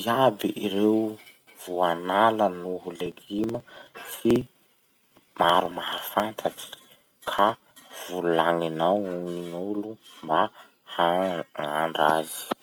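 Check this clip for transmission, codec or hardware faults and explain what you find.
One fault: periodic USB or driver dropouts, from 2.96 s to 7.82 s, right after "voanala noho". Something on the system stalls the USB bus or audio driver every 0.054 s, and each stall drops around 10 ms of speech, which is skipped rather than padded with silence. That happens about a hundred times, so the speech carries a rapid, evenly spaced ticking near 18.5 per second that sounds only while speech is present.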